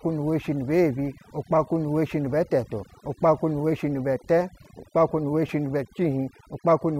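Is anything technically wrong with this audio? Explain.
Yes. Across the whole speech clip, overdone noise removal is at work. A noise reduction stage was set far too aggressively, so any frequency band that falls close to its noise estimate gets pulled down hard or shut off entirely, and the softer components of the speech are caught along with the noise. The background drops to an unnatural near-silence scattered with twinkling specks.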